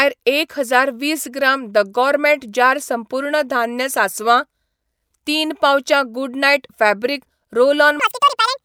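Right at the tail, from about 8.00 s to 8.64 s, the speech jumps into chipmunk territory. The audio is read two samples at a time (double speed), so each pair gets treated as one frame. That plays it twice as fast and a full octave up.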